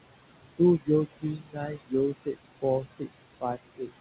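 A short speech clip with noise suppressor artifacts all the way through: the suppressor is pulling the room noise down by about 20 dB, frame by frame, so the background sinks in the gaps and swells back up under the talking. That background is ordinary room noise sitting about 12 dB under the speech. The clip also has speech cut by the noise suppressor in three spots. From 1.22 to 1.93 s it dips by up to about 22 dB, with roughly half a second of that stretch sounding swallowed. From 2.82 to 3.1 s there's a shorter dip of about 14 dB, and from 3.77 to 3.9 s one of about 18 dB, each lasting roughly a tenth of a second. In all three, quieter bits of speech got mistaken for noise and turned down along with the background, so they come out faint. The call path itself has nothing above 4 kHz, which points to a narrowband codec along the lines of G.711.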